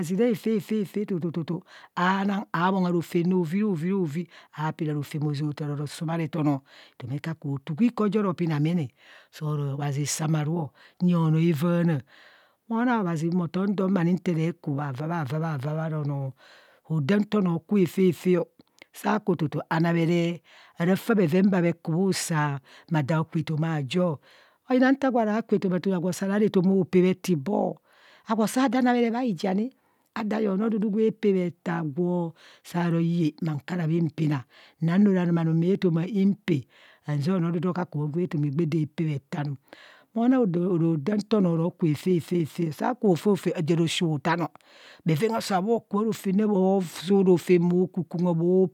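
No technical faults can be heard anywhere in this speech recording; the signal holds steady throughout.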